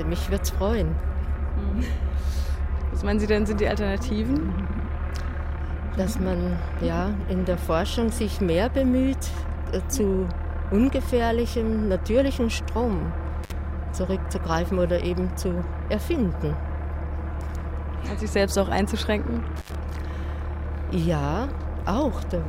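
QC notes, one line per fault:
13.44–13.52 s, intermittent contact: the audio drops out for about 52 ms, with a short crackle going in and coming out. Sounds like a loose plug or cable lead briefly losing connection, so the signal path goes open and only faint hiss gets through until it reseats.
19.56–19.75 s, intermittent contact: same thing again but longer, open for about 85 ms, crackly edges and faint hiss in the gap. The connection is loose, not a one-off.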